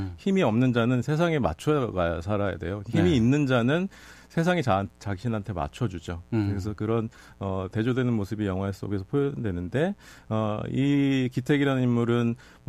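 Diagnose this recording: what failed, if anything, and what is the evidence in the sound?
A steady, raspy buzz sits under the speech for the whole recording, well below it at around 35 dB down. This is mains buzz entering through the analogue wiring: sharp switching spikes from a 60 Hz supply, with harmonics climbing into the kilohertz range.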